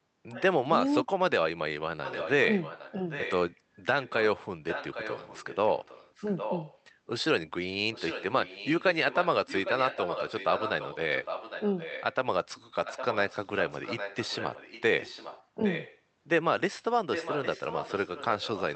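Right at the start, 0.31 to 0.42 s, there's a short scrap of echo leak: a faint copy of the talker coming back about 0.81 s late and roughly 15 dB down. That's likely the far end's loudspeaker feeding its microphone with the canceller not catching all of it. The same delayed copy keeps returning for much longer stretches, now around 10 dB below the main voice, at 2.04 to 3.56 s, 4.03 to 6.8 s, 7.93 to 12.15 s, 12.85 to 16.0 s and from 17.13 s to the end. The steady 0.81 s lag gives it a trailing, doubled sound behind the voice.

From 0.87 to 1.44 s you get speech suppressed in double talk. Both sides were talking, and the echo canceller likely couldn't tell its own talker from the loudspeaker return, so it clamped down on everything. About half a second of the voice is turned down, with the deepest dips around 40 dB, which is close to silence.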